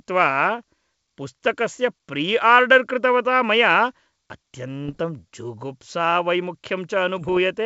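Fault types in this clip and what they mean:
Bit errors on an ADPCM link: flipped bits upset the decoder's step size and predictor. Rough, popping bursts result, around 4.88 and 7.18 seconds.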